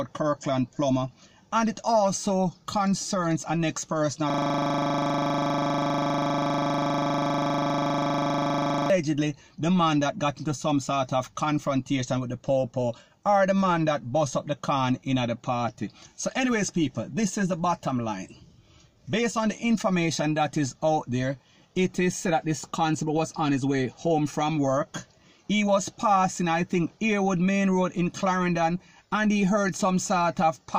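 From 4.30 to 8.90 s the playback system hangs: the computer or its audio driver freezes and stops supplying new samples, while the sound hardware keeps replaying its last 40 ms ring buffer. This system hang loop repeats one short slice of sound more than a hundred times. With a buffer that short, the repeats arrive 25 times per second and blur into a steady, rough buzz at 25 Hz instead of a distinct stutter.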